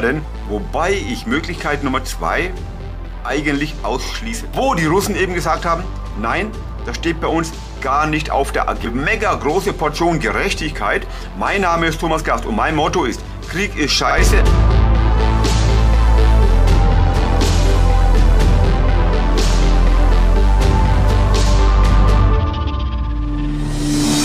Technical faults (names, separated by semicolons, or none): overlapping chunks